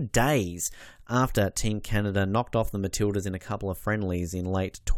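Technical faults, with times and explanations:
No technical faults can be heard in this speech clip.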